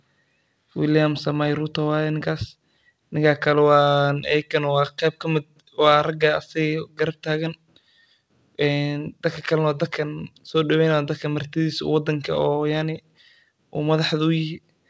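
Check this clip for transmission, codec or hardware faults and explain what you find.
No transmission, codec or hardware faults can be heard in this speech. The call path behaves as a wideband call link would: nothing reaches above about 8 kHz, which fits a G.722 codec, and its ordinary coding noise is present.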